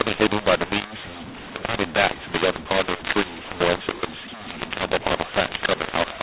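From start to finish the speech is harsh and gritty, with hiss filling every pause, the sign of mu-law and A-law mixed up: A-law telephone samples are read as mu-law, scrambling levels and lifting near-silent samples. Unlike clipping, quiet gaps distort too, within the normal 4 kHz telephone band.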